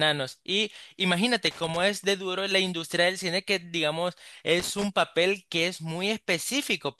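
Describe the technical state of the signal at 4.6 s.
At 4.6 s you're right inside a burst of loose connector crackle, running from about 4.59 to 4.84 s. A worn or dirty contact is making and breaking as it shifts, chopping the speech, so you get about a quarter-second of irregular scratchy crackle.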